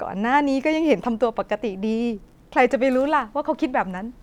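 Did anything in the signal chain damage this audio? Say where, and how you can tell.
No, nothing along the chain has left an audible mark on this speech, so there is no stage to point to.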